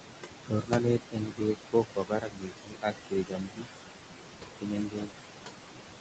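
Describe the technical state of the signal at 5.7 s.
At 5.7 s, noise suppressor artifacts, present throughout, come from a suppressor cutting bands it judges steady noise by about 18 dB, leaving gaps that pump.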